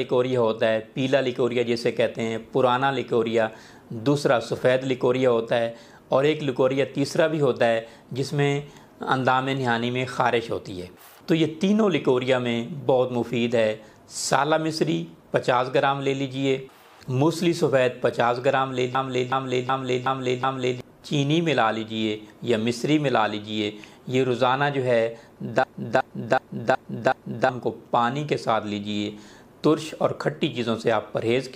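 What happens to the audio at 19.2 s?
A system hang loop runs from 18.95 to 20.81 s. A frozen system replays one 0.37 s buffer five times, a stutter at 2.69 Hz.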